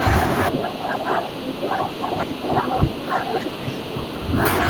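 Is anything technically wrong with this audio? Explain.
Yes. From 0.5 s to 4.44 s the speech is suppressed in double talk: the level sinks, at worst by around 10 dB. This is likely an echo canceller turning down the near talker along with the echo while both sides speak.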